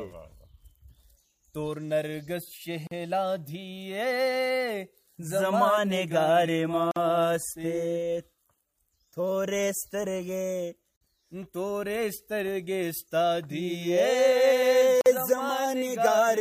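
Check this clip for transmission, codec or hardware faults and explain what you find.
The sound drops out into brief silence four times, at 2.87, 6.91, 10.96 and 15.01 s, roughly every 4 s. The first silence lasts about 42 ms and the others about 49 ms each. The edges are smeared, and the sound resumes exactly where it stopped. This is a gap at a join of encoded pieces. Each 4-second piece was encoded separately and butted together untrimmed, so the encoder's start-up delay and final-frame padding remain as silence at every seam.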